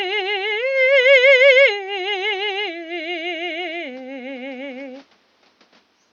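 A short piece of music, and nothing is technically wrong with it.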